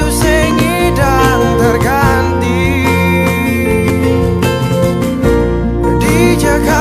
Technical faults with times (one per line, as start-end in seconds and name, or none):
0.51 dropped buffer (overrun)
3.90 dropped buffer (overrun)
5.97 dropped buffer (overrun)